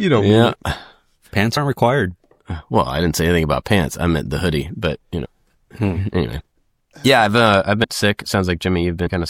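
At 1.56, 5.24 to 5.26, 6.39, 7.83 and 9.05 s, compressed frames are skipped. Whole frames never play, so the sound lurches forward by a few frames each time, which fits a frame length near 26 ms. That jump is roughly 50 ms at 1.56 and 6.39 s, about 70 ms at 9.05 s, and about 150 ms at 5.24 and 7.83 s. Overlapping frames smear each join into a soft blip. A dropout would leave a gap of silence and a hard click would be sharp, but here nothing goes quiet and the audio simply resumes further along.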